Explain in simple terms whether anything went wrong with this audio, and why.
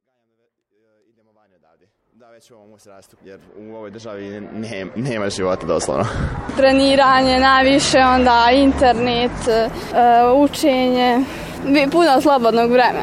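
Something did go wrong, from 3.48 to 9.48 seconds. For those six seconds the sound is an adaptive stream at a lower bitrate. The player switched to a cheaper, smaller copy of the audio, which fits a slowed connection. The switch is sudden, with no gap. The crisp top end vanishes, with nothing above about 11.1 kHz, and more codec artefacts come in. The gentle fade-in at the start, ending near 5.95 seconds, is intentional.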